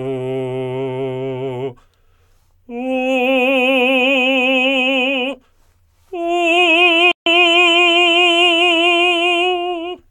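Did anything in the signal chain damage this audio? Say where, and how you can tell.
Yes. At playback, the music cuts out abruptly in mid-flow at 7.11 s and stays silent for about 0.15 s before resuming at 7.26 s. This playback stall was likely caused by the player starving for data or its output thread being blocked, leaving nothing to send until it recovered.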